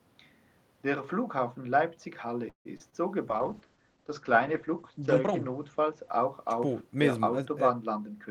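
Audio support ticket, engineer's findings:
Call audio freeze, 2.49–2.67 s. The last sound is held, fades, then about 100 ms of silence, about 158 ms in total. Audio resumes where it stopped with nothing dropped, so the rest of the call runs later. Likely cause: packets held in transit and the jitter buffer ran empty.

Short concealed packet loss, 2.77–2.82 s and 2.90–2.94 s. Brief smear at each. About 20 ms of audio never reached the decoder in time, and the receiver bridged roughly 25–27 ms by extending the preceding sound before crossfading back into real audio. Two hits within 250 ms of the freeze.

Call bitrate drop, 3.29–7.48 s. Audio goes rough and muffled. The bandwidth estimate collapsed, and the encoder fell from 40 to 10 kbps, holding the lowest rate for about 1.6 s. Coarser Opus coding plus a top-end cut from 20 kHz to 8 kHz cause the dullness. Quality recovers as the rate climbs back by 7.48 s.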